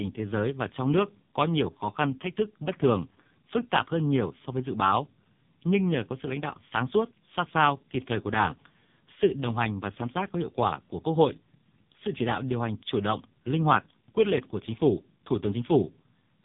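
Throughout the speech, the AMR narrowband mobile codec is running at a very low rate, likely its 5.15 kbps mode, so each frame's vocal-tract model gets only a few pulses. Nothing above 3.8 kHz survives, and the voice sounds heavily buzzy, thin and synthetic.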